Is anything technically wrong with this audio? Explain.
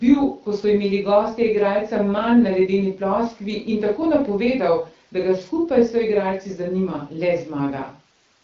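No, there's nothing technically wrong here; the speech simply comes through the AMR wideband (HD Voice) codec at a rate that sounds like 12.65 kbit/s, which is working as intended.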